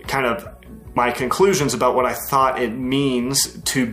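At 0.95 s, damaged data in a compressed stream makes the decoder lose frame sync, giving a brief chirp, squawk, click or short hole that shows as a thin vertical smear on the spectrogram.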